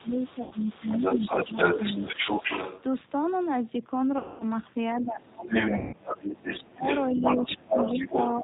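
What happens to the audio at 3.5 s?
At 3.5 s the speech carries the same G.729 codec damage heard across the whole clip, and the sound is consistent with the 8 kbit/s G.729A variant. Each 10 ms frame is rebuilt from a vocal tract filter, a pitch predictor and a few pulses, so nothing passes above 4 kHz and the speech sounds plainly rough and synthetic.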